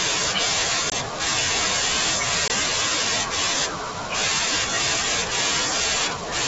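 Packet loss on an ADPCM call hits this speech recording at 0.90–0.93 s and 2.48–2.50 s. Each time, roughly one 20 ms packet drops out to hard-edged silence, and the decoder's adaptive predictor and step size drift from the sender's, so the sound resumes slightly distorted before settling.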